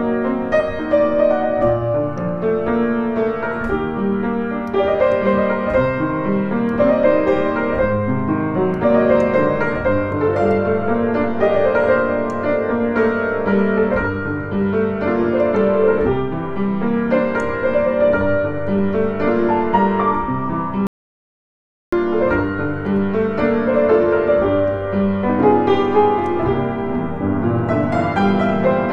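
The input feed was likely lost for a moment, through a dropped device connection, a failed link or an accidental mute, while the recorder kept writing zeros. The result is an audio dropout to silence from 20.87 to 21.92 s: the sound cuts off abruptly mid-flow and resumes just as suddenly. For about 1.06 s there is silence with no room tone at all, and whatever occurred in that span is gone.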